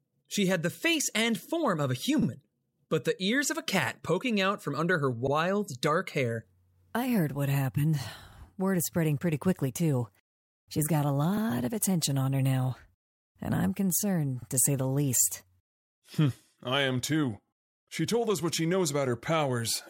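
At 2.22 s, overlapping chunks replay 50 ms where 3-second chunks join, causing a brief stutter. The waveform shows that stretch duplicated, with a visible seam.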